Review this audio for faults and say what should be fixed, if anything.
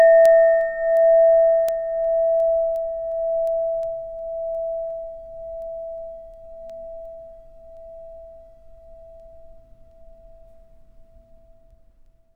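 Word clock ticks, 0.26 to 12.06 s: about thirty ticks roughly every 0.4 s, each a one-sample slip at an unlocked receiver. Steady spacing distinguishes them from random clicks. Prevent this by locking the receiving device to the sender's word clock, or by using a sample-rate converter at its input.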